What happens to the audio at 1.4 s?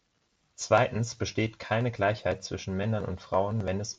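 Nothing goes wrong at 1.4 s; the speech runs on intact through that moment with no dropout, click or distortion.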